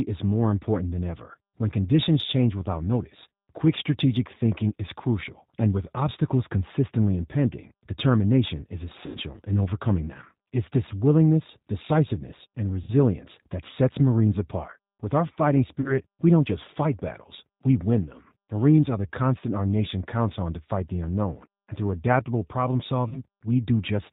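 Speech carried throughout by the G.729 codec, with plainly audible damage. Nothing above 4 kHz survives, and the voice has the rough, slightly synthetic grain of a waveform rebuilt from a vocal-tract filter, a pitch predictor and a few pulses per subframe, which points to an 8 kbit/s G.729A stream. Four dropouts show VoIP packet loss concealed by the speech codec. The first runs from 9.06 to 9.19 s, between "consistently impending determination is" and "in overcoming them", covering about 90 ms of lost audio, which fits three packets. The second runs from 12.82 to 12.92 s, covering about 60 ms, which fits two packets. The third runs from 15.81 to 15.95 s, between "our fighting" and "we don't just fight". The fourth runs from 23.09 to 23.22 s, after "and through adaptable problem". The last two each cover about 30 ms, which fits a single packet. In each gap the decoder stretches its last pitch and filter into a fading buzzy tone or coloured noise. 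Because every frame depends on the one before, the voice stays thin for a short stretch after real packets resume.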